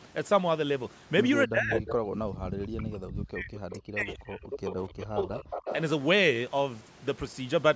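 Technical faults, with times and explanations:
1.47–3.53 s and 3.72–5.46 s, speech suppressed in double talk: while the far side talks, the speech dips by as much as about 40 dB for roughly 2 s and then 1.5 s. This is likely because the echo canceller mistook the talker for loudspeaker echo. The waveform shows gouged, near-empty stretches, and the spectrogram shows blank columns.
1.77–1.95, 2.11–2.15, 3.54–3.75, 4.10–4.15 and 5.50–5.75 s, echo leak: brief delayed copies of the speech return about 0.28–0.29 s late, roughly 10 to 20 dB below it, likely as residue a loudspeaker's canceller failed to remove. On the spectrogram they appear as faint repeats of earlier harmonic patterns.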